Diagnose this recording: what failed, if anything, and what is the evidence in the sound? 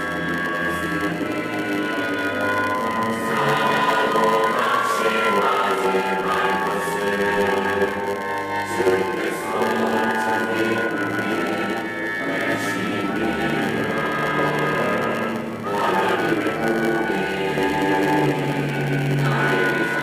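A block size mismatch (padded) at the driver or buffer stage runs through the whole recording. A steady 100 Hz buzz sits under the sound, and everything plays at 0.919 times normal speed with timbre unchanged. Each block is topped up with zeros, so a short silent gap recurs at that rate.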